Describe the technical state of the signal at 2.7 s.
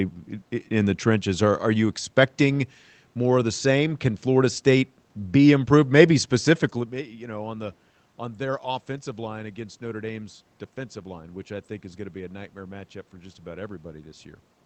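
At 2.7 s the signal is intact, with no fault to be heard.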